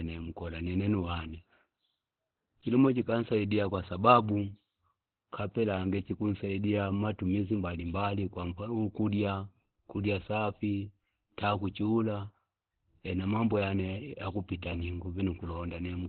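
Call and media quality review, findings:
Muffled, hoarse speech throughout; heavy codec damage, nothing above 4.4 kHz. Likely Opus compression: encoder fell back to its SILK speech mode at narrowband, cutting the top off and modelling the voice coarsely. The sound fits a rate near 12 kbps.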